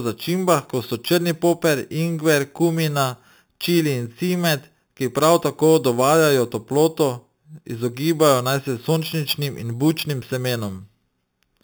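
Speech clip with imaging from sample-and-hold upsampling throughout: held 8 kHz samples leave mirrored copies, about 15 dB down at 4 to 8 kHz, whose fizz tracks the voice and moves opposite to pitch, unlike steady hiss.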